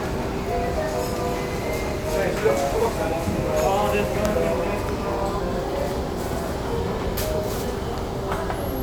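No technical faults can be heard anywhere in the audio.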